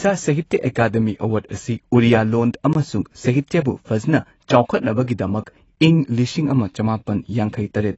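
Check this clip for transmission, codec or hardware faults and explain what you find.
One codec fault runs through the whole speech clip.

Throughout, likely AAC compression: AAC-LC at about 24 kbps lowers its cut-off and removes everything above 8 kHz, leaving speech dull and smeared with plainly audible codec damage.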